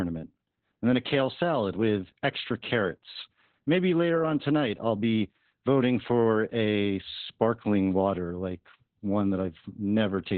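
From start to finish the speech has heavy Opus voice compression, and it sounds like the low end of what Opus does. Everything above about 4 kHz is gone, so it's stuck at narrowband and muffled like an old phone line. The voice comes out hoarse and a bit robotic because the SILK coder quantises its excitation very coarsely. That degree of damage fits a bitrate somewhere around 8 kbps.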